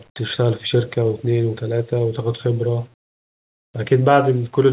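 From 2.94 to 3.74 s, the sender has likely stopped transmitting during a pause its voice detector judged silent, and the receiver fills the 0.8 s gap with comfort noise in place of the background. The real room sound, sitting about 37 dB below the loudest speech, gives way to a flat, featureless hiss about 18 dB quieter, with the narrowband call audio (nothing above 4 kHz) resuming once speech returns.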